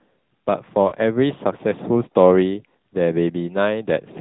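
The speech has passed through an AMR narrowband mobile codec, the AMR-NB coder used on 2G and 3G calls. The codec runs at 8 kHz and rebuilds the voice from a vocal-tract model excited by a few pulses per subframe, so nothing above 4 kHz survives. The codec damage is plainly audible: a muffled, band-limited, buzzy and synthetic tone. The degree of coarseness fits a mid-rate mode of around 10 kbps. At about 0.88 to 0.93 s there are lost AMR speech frames. Radio errors corrupted the speech data, and the missing stretch fits about two 20 ms frames, roughly 40 ms. The decoder covered the gap by repeating the last good pitch and vocal-tract settings at reduced gain. This is heard as a brief dip with a warbly smear before the voice resumes, momentarily weak or rough.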